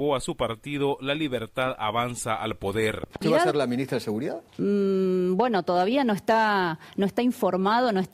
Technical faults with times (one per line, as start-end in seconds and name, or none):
3.04-3.18 loud pop